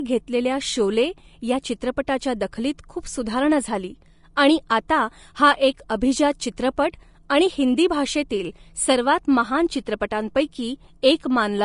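Throughout the speech the treble sounds hissy and grainy, with roughened tones and softened consonant onsets, and nothing survives above 10.5 kHz. This is likely Vorbis compression at a low setting; the level of damage fits a bitrate around 36 kbps. The codec has lowered its cut-off and quantised the remaining upper band so coarsely that fine detail turns into noise of similar energy. On a spectrogram the region above 10.5 kHz is an empty band, and the treble below it looks speckled and patchy rather than finely textured.

At 2.07 s, just after "घेतलेल्या शोले या" and right before "दखलीत खूप सुधारणा झाली", there is pre-echo. A sharp attack landed late in a transform block, and the quantisation noise, sized for the loud part, spread back over the whole block, about 10 ms, into the quiet moment before it. The same thing happens at 4.36 s, just after "दखलीत खूप सुधारणा झाली". Each attack is preceded by a brief hiss and sounds smeared. 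A spectrogram shows a faint broadband smudge just ahead of each onset, and the waveform shows low-level noise where it should be near silent.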